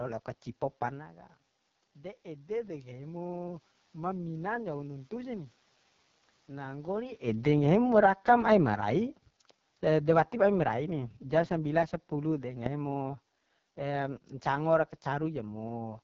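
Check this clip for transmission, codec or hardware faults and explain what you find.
Three system faults are present: heavy low-rate codec damage throughout, and two slow automatic gain changes in the middle of the clip.

Throughout, the speech passes through the AMR wideband (HD Voice) codec at what sounds like its lowest rate, which fits the 6.6 kbit/s mode. At that rate the pulse-driven vocal tract model has too few bits to follow the voice closely, so the speech comes out rough and raspy. Nothing is present above about 7.4 kHz, and the top band is filled with shaped noise rather than real detail.

From 0.84 s to 8.46 s the automatic gain is rising. Around 1 s the talker moves and the level at the microphone drops by about 14 dB. The gain control reads this as a quiet input and raises its gain slowly, by about 3 dB, over several seconds. Voice and room noise swell together, so the background noise creeps up along with the speech.

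From 7.35 s to 12.46 s the automatic gain is falling, overlapping the end of the rise. Around 7 s the talker moves again. The gain control then pulls its gain down gradually by about 8 dB. The speech sinks over roughly five seconds, and the room noise drops with it.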